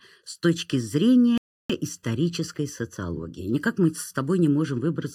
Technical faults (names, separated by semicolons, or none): channel delay (comb filtering); playback stall